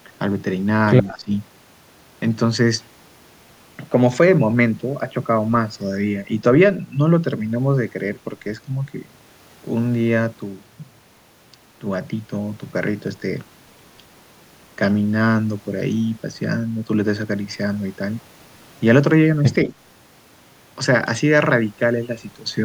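Likely confused by double talk, the echo canceller turned the speech down by about 10 dB at 1.1–1.31 s and 19.65–19.74 s. This is speech suppressed in double talk.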